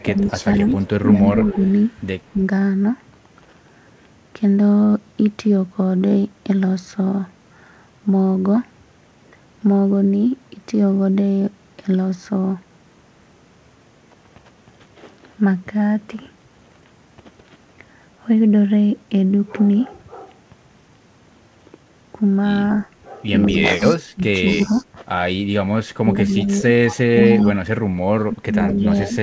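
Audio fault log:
0.0–2.02, 23.53–24.85, 26.29–27.57 and 28.69–29.15 s: echo leak. A faint second copy of the speech trails about 206 ms behind, roughly 15 to 20 dB down, likely loudspeaker pickup the far-end echo canceller didn't remove.
0.07–2.41, 23.5–24.83 and 26.02–29.22 s: speech suppressed in double talk. The speech dips and chops in places, dropping by up to about 10, 15 and 20 dB, likely the echo canceller ducking everything while both sides talked.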